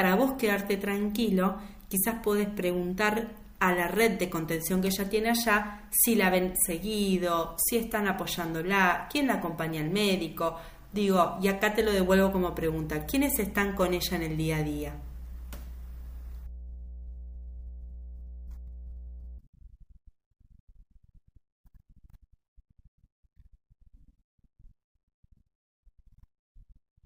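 From 11.8 s to 19.4 s, mains hum appears beneath the speech: a steady 60 Hz drone, around 15 dB below the voice, leaking in from a ground loop or nearby transformer. On a spectrogram it shows as a flat horizontal line at 60 Hz across that span.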